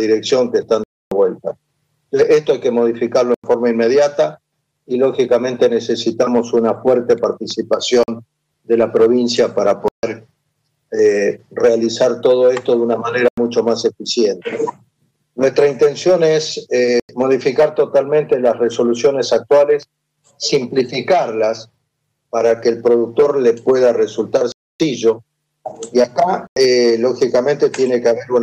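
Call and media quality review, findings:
Block of digital silence, eight dropouts: output buffer not filled in time, so whole blocks go to zero with hard edges, heard as holes. 0.84–1.12 s (279 ms), 3.34–3.44 s (93 ms), 8.03–8.08 s (47 ms), 9.88–10.03 s (149 ms), 13.28–13.38 s (93 ms), 17.00–17.09 s (93 ms), 24.52–24.80 s (279 ms), 26.47–26.56 s (93 ms). The recurring 93 ms gaps fit a 4096-sample buffer.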